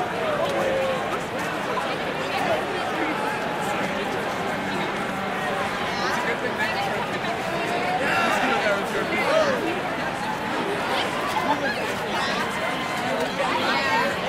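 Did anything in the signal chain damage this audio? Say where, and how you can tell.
Yes. At 8.97 s there are lost LE Audio frames on the Bluetooth LE Audio link, a wireless transport and codec fault. A gap of about 10 ms, which fits a single LC3 frame, is bridged by a brief grainy smear instead of the real sound. The LC3 decoder concealed the loss by repeating the previous frame's spectrum with randomised phase signs, so the energy stays but the detail turns noisy. A buffer underrun would instead leave a silent hole or a hard click.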